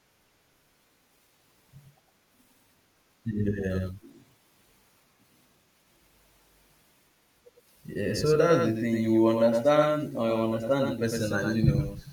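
The speech was likely captured a second time through a slower path, so a doubled audio track runs throughout: a full-band copy trails about a tenth of a second behind, roughly 5 dB quieter, giving every syllable a dry, undecayed slap with no room colour.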